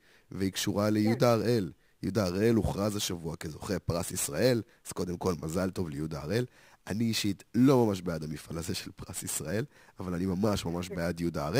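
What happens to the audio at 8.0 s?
At 8.0 s the speech carries sample clock jitter, present through the whole clip. The converter's clock wanders by roughly 10 microseconds, so steep, bright parts of the waveform are sampled off-time. The result is a roughness about 20 dB below the signal. Unlike steady background hiss, it swells with loud, high-frequency sounds and disappears in pauses.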